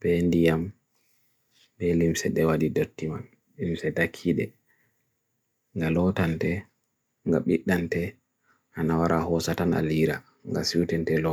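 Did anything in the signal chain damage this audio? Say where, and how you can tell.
No, nothing in the signal chain audibly damaged this speech recording, and none of its stages has left any mark on the signal.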